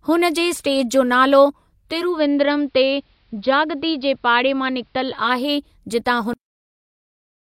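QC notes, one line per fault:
1.83–5.54 s, digital radio blending to analogue: the receiver lost the digital stream and cross-faded over about 0.39 s to the station's AM broadcast and later back. The level drops about 2 dB, and faint hiss appears far below the signal.
6.33 s, cut-off end: the final stretch of audio was never written out, so playback stops mid-sound and falls straight to digital silence through to the end of the clip. There is no natural decay or fade, just an abrupt halt.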